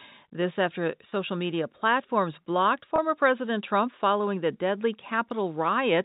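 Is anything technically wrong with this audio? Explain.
Yes. There are two brief dropouts of packet loss with pitch repetition in this speech, at 1.1 s, just before "media platforms blocked", and at 2.96 s, just after "media platforms blocked". Each time about 20 ms of audio went missing, which points to a single lost packet. The receiver filled each gap by repeating the last pitch period of the voice, so each one sounds like a tiny held, slightly buzzy blip rather than a hard cut. The audio passes through G.711 telephone coding, with its 4 kHz bandwidth ceiling.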